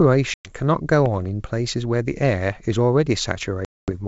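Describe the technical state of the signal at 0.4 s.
At 0.4 s you're right in the middle of a dropout from packet loss on an ADPCM call, running from about 0.34 to 0.52 s. Roughly 110 ms of audio, likely around ten packets, went missing and got filled with hard-edged silence. Because ADPCM only sends differences, the decoder's predictor and step size drift out of sync with the sender, so the speech comes back with a bit of distortion before it settles.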